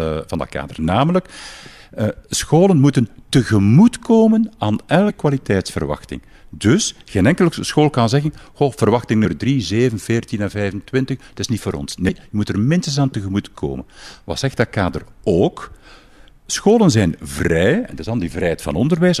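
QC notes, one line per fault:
5.09 s, compressed frames skipped: after "scholen moeten tegemoetkomen aan", about a tenth of a second vanishes, consistent with roughly five 23.2 ms frames dropped.
12.08–12.10 s, compressed frames skipped: between "is niet voor ons" and "moet er minstens aan", roughly 100 ms jumps ahead, fitting five lost 23.2 ms frames.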